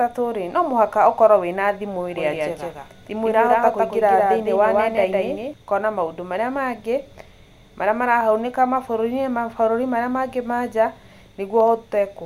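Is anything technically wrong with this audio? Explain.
Yes. From about 2.2 to 5.5 s there is a doubled audio track. A second full-band copy of the speech trails the original by roughly 150 ms at about equal level. It likely comes from a slower capture path. Each syllable echoes sharply, with no decay, and the copy starts and stops abruptly.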